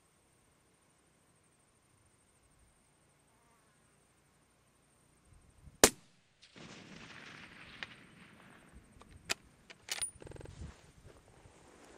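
A rapid machine-gun stutter runs from 10.26 to 10.50 s: a 46 ms fragment repeats exactly five times, hammering at about 21.5 Hz, and roughly a fifth of a second of audio that should have played is lost. This is a system hang loop. The computer or its audio driver stalled while the sound hardware kept replaying the same ring buffer, whose length fits a 2048-sample buffer.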